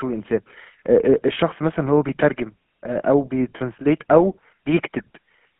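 The whole clip carries GSM full-rate codec damage. The speech sounds buzzy and gravelly, which fits 13 kbps. The band runs only from 150 Hz to 3.4 kHz.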